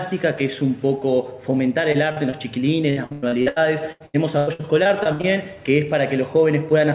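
At 1.92 s, 2.12 s and 2.30 s there is short concealed packet loss: about 20 ms, 40 ms and 20 ms of audio failed to arrive, and the receiver patched each hole by extending the preceding sound before blending back, heard as a brief smear or wobble. From 2.90 s to 5.25 s, repeated packet loss (robotic sound) sets in. Sixteen separate holes, the longest about 98 ms, leave roughly a third of that stretch synthesized, so the sound turns choppy with pieces missing. The narrowband character, with nothing above 4 kHz, points to a G.711-type call path.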